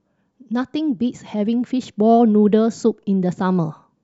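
No technical faults are audible anywhere in this speech recording.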